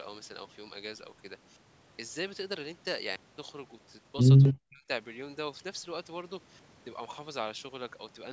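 A short speech recording, band-limited by call microphone processing so that nothing reaches above 8 kHz, has two problems close together. From 4.43 to 4.54 s a faint second copy of the voice trails the original by about 123 ms, sitting roughly 10 dB below it. This is an echo leak, most likely from a far end playing the call on a loudspeaker, where the echo canceller failed to remove everything its microphone picked up and sent that residue back down the line. Almost immediately after, from 4.52 to 4.88 s, the talker's voice sinks sharply, by as much as 40 dB at its deepest, with about a third of a second affected in total. That points to speech suppressed in double talk. With both sides sounding at once, the echo canceller likely could not tell the local talker from the loudspeaker echo and turned everything down together.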